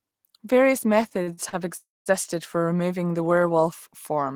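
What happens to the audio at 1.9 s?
A call audio freeze from 1.77 to 2.09 s: the last sound smears into a fading buzz, then about 200 ms of flat silence, likely from a starved jitter buffer, before resuming late.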